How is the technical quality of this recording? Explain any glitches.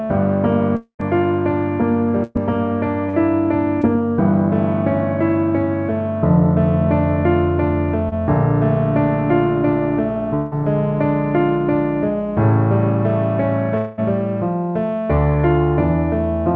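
The recording has clear network damage: three long dropouts, a stretch of choppy loss, and one brief smear. It sounds like a wideband call link, with nothing above 8 kHz, which fits G.722 at 64 kbps.

Long network dropouts hit at 0.76–1.01 s, 10.36–10.53 s and 13.77–14.00 s, likely from the connection stalling. The receiver stretches the last sound into a fading buzz. In the first one that runs out and leaves about 90 ms of silence. The missing audio never comes back.

Repeated packet loss (robotic sound) runs from 2.23 to 3.85 s. There are four separate holes, the longest about 116 ms, each patched by extending what came just before. Back to back, they make the sound choppy, with bits dropped out.

Short concealed packet loss at 8.09 s is about 20 ms that arrived too late to play. The decoder bridges it by continuing the prior sound and blending back in, so you hear a quick smear or wobble, and a tiny detail may go missing.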